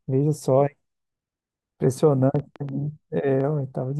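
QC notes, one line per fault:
2.36–3.42 s: train of clicks. About five sharp clicks tick over the speech, roughly 3.8 per second. The spacing is uneven, so they sound like a stuttering tick rather than a steady beat. Each click has much the same short, hard shape, and the loudest reach about the level of the speech itself. That makes them plainly audible over the words. The likely cause is interference from nearby equipment or a faulty connection or power supply injecting pulses.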